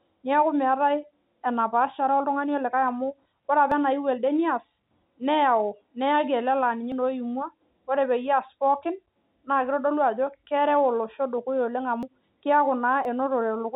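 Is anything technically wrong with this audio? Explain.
Yes. The speech jumps forward abruptly four times: at 3.72 s, just before "enayieu elde neas"; at 6.92 s, just before "naa oimua"; at 12.03 s; and at 13.05 s. Each is a discontinuity with no gap of silence. This is a dropped buffer (overrun), likely from the capture software failing to read its buffer before the hardware overwrote it, so a chunk vanished and the edges were spliced. The losses are roughly a few tens of milliseconds, the longest around 70 ms near 12.03 s. The steady 4 kHz telephone band from the G.711 path sits underneath throughout.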